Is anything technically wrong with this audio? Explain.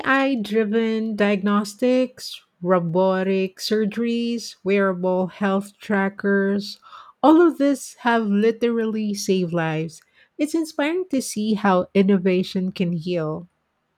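Yes. From 1.25 s to 12.78 s, small clicks sound regularly, about every 1.65 s. There are roughly seven of them, heard against the speech as brief ticks at a steady rhythm. These are clock drift buffer slips, likely caused by two devices running on separate clocks that disagree by around 100 ppm. The buffer between them gradually drifts until a few samples are dropped or repeated, and each of those jumps produces a click.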